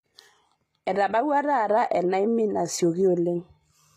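From start to finish the sibilants sound gritty and metallic, with a lisping edge on s sounds, and the treble has a synthetic brightness that never quite matches the body of the speech. Nothing reaches above about 14.9 kHz. This is likely HE-AAC compression, whose damage is plainly audible here and which fits a low bitrate near 24 kbps. The codec rebuilds the upper band by copying lower harmonics upward, so they fail to align across the crossover.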